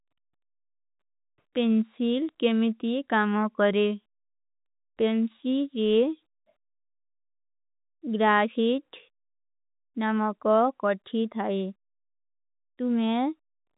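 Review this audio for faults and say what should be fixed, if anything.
Nothing needs fixing; no faults can be heard here.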